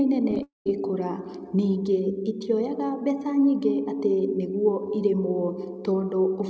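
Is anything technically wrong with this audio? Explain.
Yes, there's a cluster of trouble right near the start, all inside the first two-thirds of a second.

First come three short concealed packet losses, at 0.31 to 0.33 s, 0.35 to 0.37 s, and 0.39 s. Each one is about 10 ms of audio that didn't reach the decoder in time. The receiver patched each gap by carrying the previous sound forward and then blending back into the real signal. Spaced this tightly, they come across as a quick run of little smears or wobbles rather than clean speech.

Right after that, from 0.43 to 0.66 s, is what sounds like a long network dropout, likely a longer burst of loss on the link. About 230 ms goes missing. The concealment first stretches the last sound into a fading buzz or hiss, and then roughly 150 ms of that stretch is plain silence before the speech picks back up with that piece gone. All of this rides over the G.722 call path at 64 kbps, which is why nothing sits above 8 kHz.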